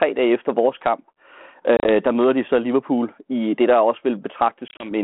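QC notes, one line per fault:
1.77–1.90 s and 4.68–4.91 s: packet loss on an ADPCM call, several packets dropping into hard-edged silent holes (about 60 ms scattered over 80 ms, then 80 ms over 120 ms, runs up to 30 ms). The ADPCM decoder's predictor and step size desynchronise, so audio resumes briefly distorted before settling.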